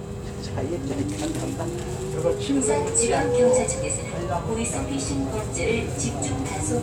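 No technical faults can be heard in this sound.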